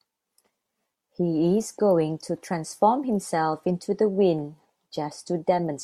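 No faults can be heard anywhere in this speech recording.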